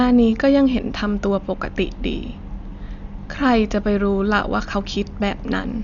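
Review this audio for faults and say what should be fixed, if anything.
An encoder short of bits, likely Dolby Digital compression, narrowed the band and gave many frequency lines no mantissa data, which the decoder filled with dither noise. Throughout the speech nothing survives above 7 kHz, leaving it dull and roughly fluttering, damage that fits about 48 kbps. Encode at a higher bitrate or keep an uncompressed master for distribution.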